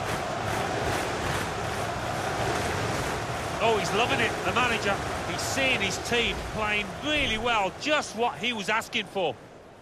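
No technical faults can be heard anywhere in the clip. There is nothing to place in time and no fault to describe.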